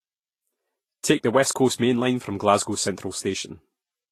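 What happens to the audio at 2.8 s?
At 2.8 s, as throughout, the speech shows low-bitrate audio saved at a high bitrate: dull, smeared coding artefacts, likely from an earlier low-rate encode that the later high-rate MP3 cannot restore.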